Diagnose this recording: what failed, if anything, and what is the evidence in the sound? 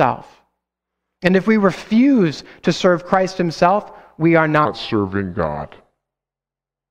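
The final stretch of speech was most likely rendered against the wrong clock at the editing or playback stage, leaving a section at the wrong speed. From 4.65 s to the end at 6.91 s, the audio runs at 0.756 times its recorded rate, so it slows and drops by about five semitones at once. Speed and pitch shift together with no transition, which points to a resampling or clock mismatch rather than any deliberate time-stretch.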